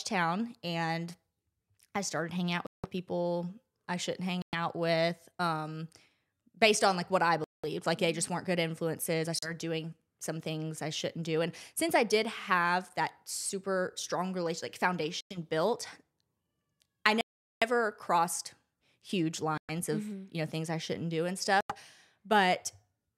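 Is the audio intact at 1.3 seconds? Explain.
Yes, at 1.3 seconds the speech plays through cleanly, with no dropout, click, distortion or other fault at that moment.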